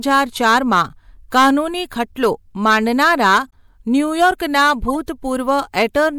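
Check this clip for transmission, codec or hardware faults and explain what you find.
Yes, two problems turn up in this speech: repeated hard clipping and a couple of corrupt decoded frames.

The hard clipping hits at 0.11–0.82 s, 1.35–1.50 s, 2.65–3.38 s, 4.21–4.71 s and 5.49–6.08 s, overdriven by about 3 to 8 dB. Peaks exceed what a stage can pass and get flattened, so the loud parts pick up a gritty, crackly edge from the added high harmonics.

The corrupt frames decoded sit at 3.49–3.53 s, very faint at about −40 dBFS, and 4.88–4.96 s, much louder at about −10 dBFS. Each hits a few frames. Damaged bits were decoded as if valid, throwing energy to the wrong frequencies, heard as a short blip or chirp.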